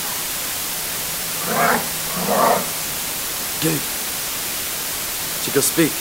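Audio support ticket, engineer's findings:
Low bit depth with dither, whole clip. Constant, even hiss sitting roughly level with the sound itself, no grit or distortion. Sounds like a 4-bit stage with dither added before rounding, so the quantisation error gets spread into steady white noise.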